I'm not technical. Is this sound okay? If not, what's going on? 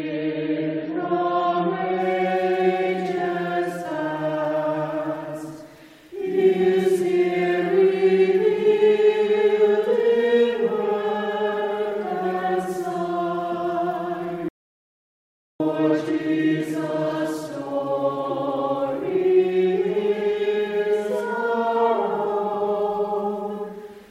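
No. There are two problems.

The first is an adaptive stream starting at a low bitrate. For the first 2 seconds, the sound is dull and smeary. The crisp, bright top end is missing, with nothing above 6.9 kHz. The player began on a cheap, low-quality copy so it could start fast. At 2.0 s it switched to a better copy, and the sound suddenly gets clearer. There is no gap at the switch.

The second is an audio dropout to silence. From 14.49 s to 15.60 s, about 1.1 seconds, the sound stops completely. It cuts off mid-flow and comes back mid-flow. The gap is dead silent, with no background hiss or room sound at all. Whatever happened in that stretch is lost. The likely cause is that the input was briefly lost while the recording kept writing silence.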